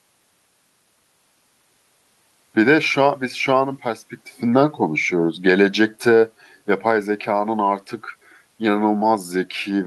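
Listening closely to the recording, nothing stood out as a technical problem at any point.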